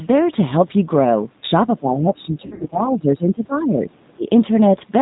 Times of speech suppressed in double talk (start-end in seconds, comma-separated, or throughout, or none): 1.76-4.26